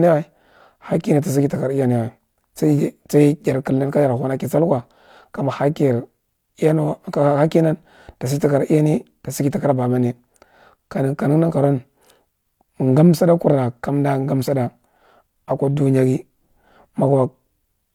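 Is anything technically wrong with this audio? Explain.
No, nothing is technically wrong with this audio.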